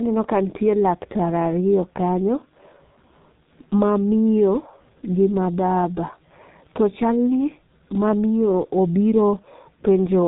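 Throughout the speech the sound is muffled and hoarse, with consonants smeared together and nothing audible above 4 kHz. This is heavy G.723.1 codec damage: coding at about 6.3 kbit/s in 30 ms frames strips the high band and tracks the voice too slowly to keep its detail.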